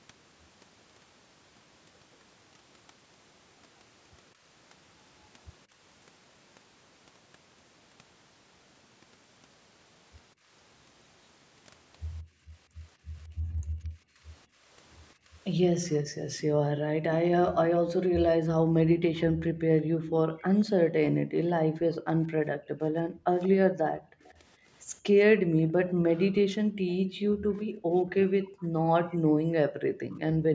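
At 10.34 to 10.49 s the echo canceller clamped the microphone while the loudspeaker played, so the room sound dips by about 23 dB. From 12.22 s to the end this background gating by the echo canceller recurs for roughly ten seconds in total, with drops as deep as about 40 dB.

An echo leak is the likely cause of a faint copy of the speech trailing the original by 181 ms, at 19.15 to 20.65 s, 21.88 to 22.03 s, 23.43 to 24.34 s and 27.54 to 29.17 s. The residual echo sits about 15 to 25 dB below the speech.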